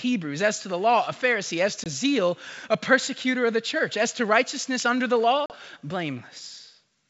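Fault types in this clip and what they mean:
Packet loss on an ADPCM call: Packets of audio went missing and were replaced by silence. There are two hard-edged holes, near 1.84 s and 5.46 s. The first loses about 20 ms, which fits a single packet. The second loses about 40 ms, or roughly two packets. After each hole, the decoder's adaptive predictor and step size no longer match the sender's. So the speech returns slightly distorted. It settles within some tens of milliseconds.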